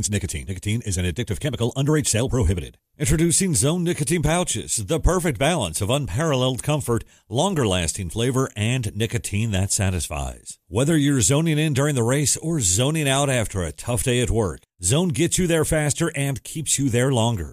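Listening to this speech recording, nothing technically wrong stood out at any point.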